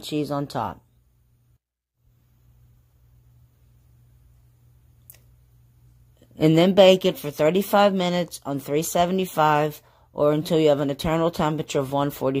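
Nothing stood out as a technical fault on listening.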